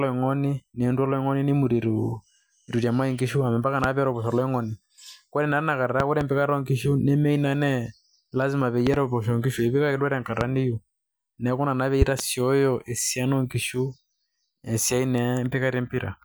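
Loud pops land at 3.84–3.87 s, 6.00–6.24 s (a double), 8.87–8.97 s (double), 10.41–10.44 s, and 12.02–12.22 s (double, just after "ina naa pee"), peaking about 15 dB above the speech. Each is likely an electrical voltage spike. Unlike a dropout or clipping, the speech continues intact beneath each thump.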